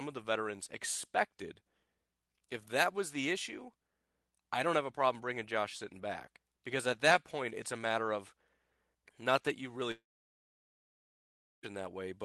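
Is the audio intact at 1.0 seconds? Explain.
Yes, the speech at 1.0 seconds is intact, with no fault at that moment.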